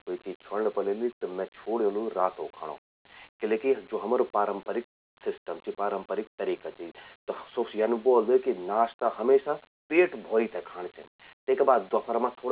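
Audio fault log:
No faults are heard anywhere in this speech clip. The linear 8-bit audio at an 8 kHz rate carries its expected grainy rounding noise, about 40 to 50 dB below the loudest peaks, as it should.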